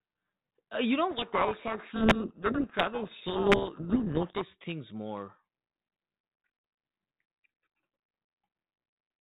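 Between "you know" and "things more" (1.10 to 4.43 s), a codec payload misread flips the bit order of G.726 code words, burying speech in harsh distortion.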